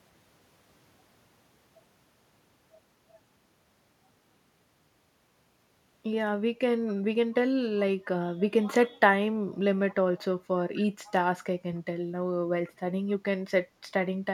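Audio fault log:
6.88–6.94 s and 11.06–11.12 s, echo leak: two brief, faint scraps of delayed speech trail the talker by about 251 ms, sitting roughly 25 dB below the direct sound. The likely cause is a far end on loudspeaker whose echo canceller failed to remove everything its microphone captured, so a quiet copy of this side's speech returned. Each leak lasts only about 60 ms, which makes it a short ghost rather than a sustained echo.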